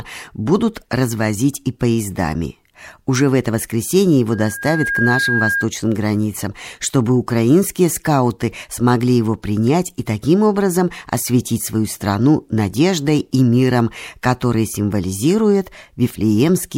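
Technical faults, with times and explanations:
4.31 to 5.67 s, loudspeaker feedback squeal: a 1.6 kHz tone swells over roughly 0.7 s to about the level of the speech, because the microphone hears its own loudspeaker and the loop gain tops one there. A spectrogram shows one bright horizontal line thickening; the waveform envelope balloons.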